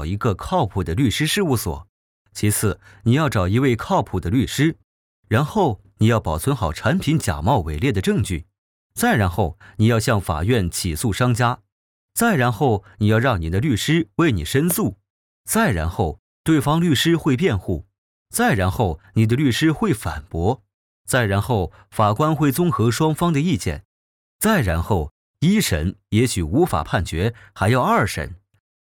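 A single loud pop lands at 14.71 to 14.73 s, a sharp transient peaking roughly 10 dB above the surrounding audio, which continues unbroken beneath it. The likely cause is a voltage step or spike, from a plug, switch, static discharge or driver glitch, entering the signal chain and being shaped by the downstream circuitry into a brief click.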